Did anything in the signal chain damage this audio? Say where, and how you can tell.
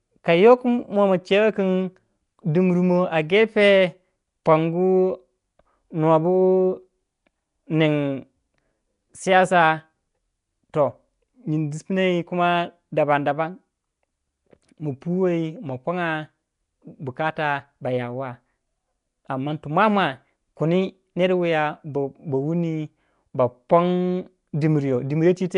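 Yes. Nellymoser compression throughout, at the codec stage: rough, hissy, smeared speech with nothing above 10.6 kHz, likely from coarse blocks coded at roughly 44 kbps.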